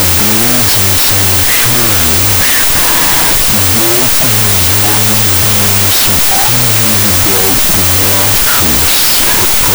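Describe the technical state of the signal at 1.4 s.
At 1.4 s you're hearing a wrong sample width, and it runs the whole clip. The 32-bit float data gets read as 16-bit integers, so each sample becomes two garbage-ish values. You get loud noise with the speech buried inside, playing at half speed and an octave low.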